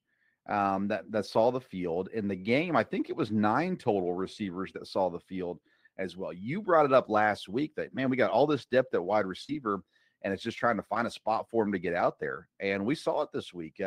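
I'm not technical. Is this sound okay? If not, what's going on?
No. There are two moments of short concealed packet loss, at 9.44 to 9.49 s and at 10.94 to 10.96 s. Tiny pieces of the call, about 40 ms and then about 10 ms, arrived too late to be played, so the receiving end invented stand-in sound by stretching what came just before. To the ear this is a quick smear or wobble in the speech, and a very short sound there may go missing.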